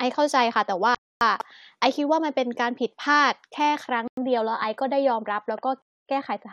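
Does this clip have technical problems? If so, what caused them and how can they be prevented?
Yes. The speech cuts to silence three times: 0.95 to 1.21 s, 4.08 to 4.17 s and 5.82 to 6.09 s. These are likely Bluetooth stalls, where delayed packets emptied the headphone buffer and playback paused. Keeping the phone close to the headphones and away from 2.4 GHz interference prevents them.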